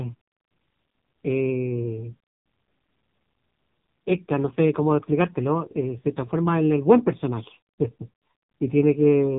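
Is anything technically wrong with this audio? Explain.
Yes. Throughout the speech, an AMR narrowband mobile codec is audible. The codec models the voice from a few pulses per frame, so it sounds buzzy and synthetic, which fits roughly 5.9 kbps. Plain filtering would only muffle it, but here nothing passes above 3.8 kHz.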